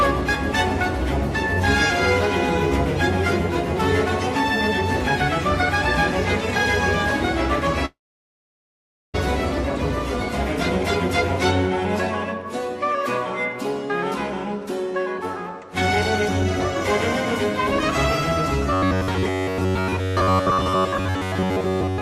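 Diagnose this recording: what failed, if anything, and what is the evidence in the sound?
Network stage: a long network dropout, likely from lost packets. At 7.85 s the sound breaks off. A fading continuation gives way to about 1.2 s of silence. At 9.16 s the sound resumes, but about 1.28 s of material never returns.

Buffer stage: robotic sound from repeated short buffers runs from 18.73 s to the end. The sound becomes a rigid metallic buzz near 93.8 Hz, which fits a roughly 10.7 ms fragment being looped. It is likely caused by late-arriving blocks, with most of the real audio skipped.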